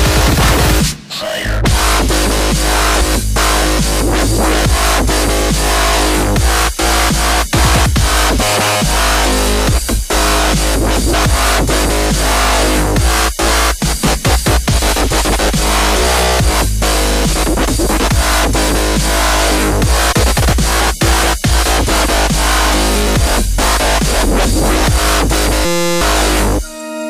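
At 3.00, 7.08, 11.12 and 20.11 to 20.13 s, compressed frames are skipped. Whole compressed frames, consistent with a 23.2 ms frame length, never play, so the sound jumps ahead by about 400, 100, 150 and 100 ms.

From 25.65 to 26.01 s, a system hang loop replays one 5.8 ms slice 62 times, which fits a 256-sample buffer. With the host stalled, the hardware cycles that buffer and produces a steady 172 Hz buzz, and roughly 400 ms of audio is lost.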